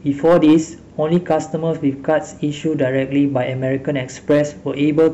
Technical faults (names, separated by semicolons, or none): hard clipping